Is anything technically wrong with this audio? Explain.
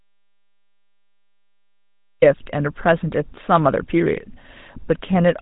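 Yes. The speech carries the damage of a GSM full-rate codec throughout, and the clip opens in an audio dropout to silence.

From the very start until 2.22 s there is silence, with no room tone or noise floor, before the speech cuts in mid-flow. The likely cause is a lost input, such as a disconnected device, a failed link or a stray mute, while recording carried on writing silence. On the waveform this is a flat line, and on a spectrogram it is a blank, empty block ending abruptly where the speech appears.

The GSM full-rate codec damage is plainly audible across the whole recording. The codec reduces speech to a vocal-tract filter driven by regularly spaced excitation pulses, and it throws away two thirds of the excitation samples, which fits a 13 kbps stream. The voice comes out buzzy and gravelly. A spectrogram shows a hard ceiling at 4 kHz, with nothing above it, and smeared, coarse harmonic structure below.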